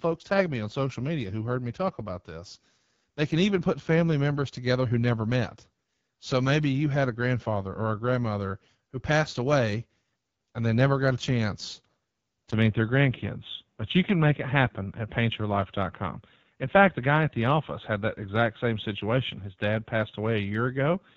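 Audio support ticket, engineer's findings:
AMR wideband (HD Voice) codec, whole clip. Speech rough and raspy throughout, plainly audible coding damage, top band above 6.4 kHz reduced to shaped noise. Texture fits AMR-WB's 8.85 kbit/s mode, one of its two lowest rates, where the pulse-driven vocal tract model runs short of bits.

Input switched to a poorer device, likely cause, from 12.51 s to end. 20 ms dropout at 12.51 s, then audio dull and boxy, nothing above 3.8 kHz. Level unchanged, faint new background noise well below the signal. Points to a microphone or headset call-profile swap mid-recording.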